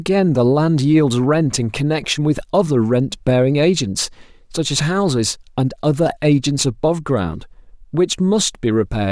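No technical faults can be heard anywhere in the recording.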